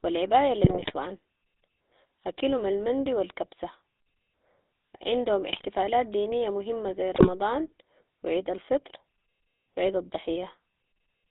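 From start to finish the speech has a buzzy, gravelly roughness that is plainly audible. It sits in a narrow band of roughly 250 Hz to 3.7 kHz, with nothing above. This is the GSM full-rate codec, and the sound fits its 13 kbps stream. The codec models the vocal tract and drives it with regularly spaced pulses, keeping only a third of the excitation samples, so fine vocal detail turns to grit.

Three short bursts of squawking and gargling then break through. The first runs from 0.64 to 0.92 s, right after "و العباية". The second runs from 5.52 to 5.65 s, just before "دينية مهمة زي", and the third from 7.15 to 7.29 s, just after those words. These are GSM bit errors. Flipped bits corrupt the filter, pitch and gain values reaching the decoder, which warps the spectrum or spikes the level frame by frame. The first and longest burst points to the densest errors, around 4% of bits.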